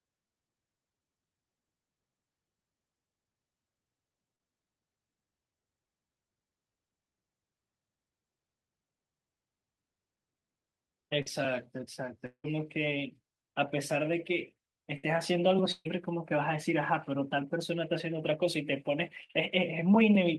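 Short concealed packet loss shows up first, at 4.35 to 4.49 s, again at 5.87 to 5.90 s, and at 11.22 to 11.28 s. Each time 20 to 40 ms of speech never arrived, and the decoder papered over it by extending the last sound, so you get a quick smear or wobble.

At 12.26 to 12.46 s there's what's likely a long network dropout. About 180 ms is gone, filled with a fading continuation of the previous sound that sinks into roughly 80 ms of near-silence before the speech picks up further along.

Then come bursts of packet loss at 14.98 to 15.08 s, 15.72 to 15.88 s and 19.24 to 19.31 s, losing about 60, 140 and 60 ms respectively. Each one turns into a held buzz or fading hiss, with a brief 30 ms dip to silence in the middle one.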